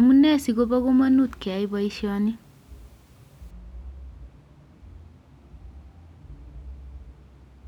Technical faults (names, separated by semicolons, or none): de-emphasis applied wrongly